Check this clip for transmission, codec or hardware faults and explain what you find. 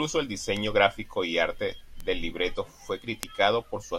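Three bit error spikes break into this speech clip. Each is a single sharp tick with no connection to the speech around it, spread across the whole spectrum. The first comes at 0.57 s, just before "gráfico y arte del". The second is at 2.00 s, between "gráfico y arte" and "del libreto fue". The third is at 3.23 s, after "arte del libreto fue". The first two peak at about -17 dBFS and the last, loudest one at about -5 dBFS. Each comes from a flipped bit in one to three consecutive samples. The sample value jumps by a power of two and snaps straight back.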